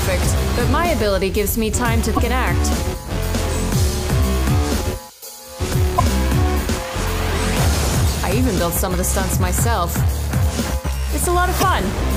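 Brief glitches break through at 2.13 to 2.19 s, 5.94 to 6.00 s, 9.06 to 9.08 s and 11.60 to 11.63 s. These are damaged data in the compressed stream: corrupted bytes made the decoder misread frames and lose sync until it found the next frame header.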